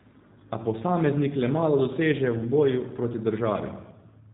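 Throughout, the speech carries plainly audible G.729 codec damage. The spectrogram shows a flat ceiling at 3.8 kHz, and the rough, synthetic buzz fits 8 kbit/s coding.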